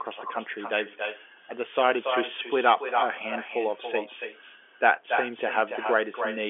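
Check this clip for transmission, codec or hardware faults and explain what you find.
One fault runs through the whole recording: echo with no canceller. It never lets up, from start to finish. Each phrase returns roughly a third of a second later as a fainter copy, about 7 dB below the original. The far end is playing the call through a loudspeaker, and its microphone sends that sound straight back. No echo canceller removes it. The copy sounds thin and trails every phrase. The telephone band, carried by G.711, tops out near 3.7 kHz.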